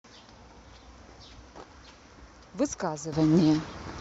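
A speech recording of about 4 seconds carries a sudden gain jump at 3.13 s, where the level steps up by about 12 dB from one sample to the next and stays raised to the end. The speech and the background noise rise together, which likely points to a digital gain setting applied without a ramp. On a waveform the envelope widens abruptly at that instant. On a spectrogram every band, noise floor included, brightens at once along a sharp vertical edge.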